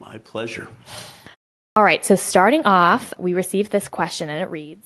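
At 1.68 s, after a pause of about 0.41 s, there is a clipped start after a pause. The playback device appears to have idled during the silence and needed time to wake and lock again, so the first 84 ms of the speech, up to 1.76 s, never reached the output. The onset therefore jumps straight out of silence with its initial sounds missing, giving an abrupt, truncated attack rather than a natural rise.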